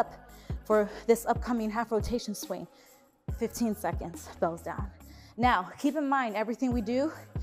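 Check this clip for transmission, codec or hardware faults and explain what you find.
Nothing wrong can be heard anywhere in this clip.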